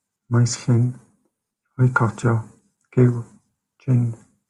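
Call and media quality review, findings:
CD scratch ticks, 2.04 to 3.68 s: ten regular ticks, about six per second, each a few milliseconds. A disc blemish is defeating error correction once per revolution, leaving interpolated or muted samples.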